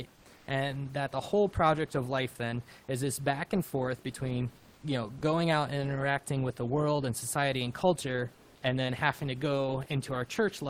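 Comfort noise in place of the background appears in this speech clip at 0.15 to 0.25 s, 0.36 to 0.47 s, 4.57 to 4.83 s and 8.35 to 8.62 s, in stretches of 100 to 270 ms. In each gap the room noise, which sits about 30 dB below the speech, is swapped for a synthetic hiss about 1 to 2 dB quieter. This is likely Opus discontinuous transmission: the sender goes quiet when it detects no speech, and the receiver fills the gap with generated noise shaped roughly like the real background. Sound dropped by the voice detector occurs at 5.18 to 5.21 s, where 30 ms of audio gives way to that same steady noise before the signal returns. The likely cause is the sender's detector mistaking some of the sound for background and stopping transmission until it triggered again.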